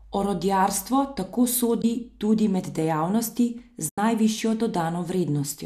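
AAC frame loss with muting occurs from 1.82 to 1.84 s and again from 3.89 to 3.98 s. The decoder zeroed the missing frames' spectrum, so the overlapping windows fade the speech out and back in, leaving soft-edged gaps over the clip's light, likely low-delay AAC coding.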